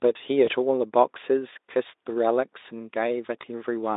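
VoIP packet loss concealed by the speech codec, at 0.45–0.50 s and 3.41–3.44 s: one 20 ms frame goes missing, and the Speex decoder extrapolates its last pitch and filter, briefly smearing the speech into a buzzy tone or coloured noise that fades.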